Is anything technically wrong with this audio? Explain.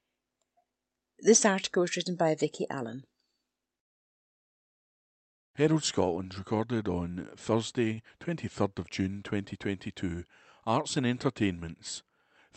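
Yes. At about 7.93 to 8.0 s there is a short stall from a late packet. A packet arrived late and the jitter buffer ran dry. The receiver stretched the last sound for about 36 ms, then resumed where it left off. Nothing is lost, but the speech briefly drags with a slight buzz or dip. The call codec's 8 kHz high-frequency cut-off can also be heard.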